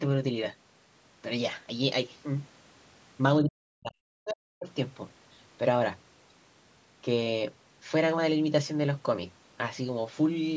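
Speech with two sharp dropouts, at 3.42–3.96 s and 4.17–4.68 s, where the level falls by roughly 40 dB. The waveform collapses to near-flat. This is likely speech suppressed in double talk, with the echo canceller ducking the talker.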